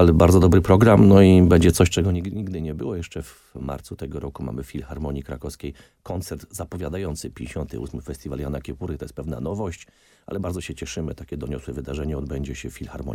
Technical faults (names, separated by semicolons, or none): zipper noise